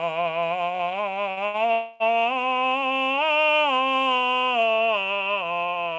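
Twice in quick succession, a packet arrived late and the jitter buffer ran empty, causing a short stall from a late packet. The receiver held the last bit of music until the packet arrived, at 1.31 to 1.40 s (58 ms stretched) and 1.46 to 1.57 s (82 ms). Each time a sound is drawn out with a faint buzz before the music carries on with nothing lost. A call audio freeze follows at 1.72 to 2.03 s, likely from packets held up in transit. The last sound is continued as a fading buzz for about 280 ms without ever falling silent, then the music picks up exactly where it stopped. Through all of this the band ends at 8 kHz, which fits G.722 on a WebRTC call path.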